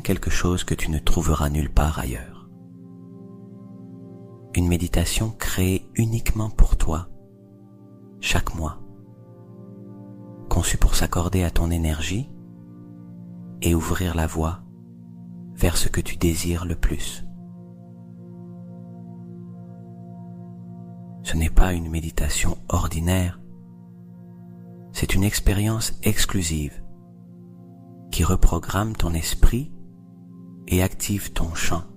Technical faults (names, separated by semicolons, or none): none